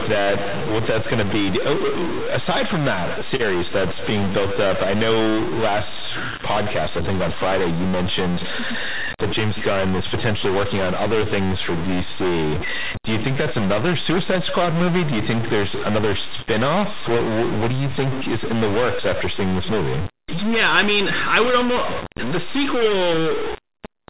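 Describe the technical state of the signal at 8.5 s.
At 8.5 s the speech carries a distortion, grainy if the stuck bit is low and buzzy if it is high, that runs through the whole clip rather than starting or stopping near that point. The likely cause is a stuck bit: one data bit is pinned at 0 or 1, so roughly half the samples land off by that bit's weight, following the waveform's shape. Because that bit also flips with the sign of small values, the quiet gaps fill with noise instead of going silent. The call path's G.711 mu-law coding is working as expected, with nothing above 4 kHz.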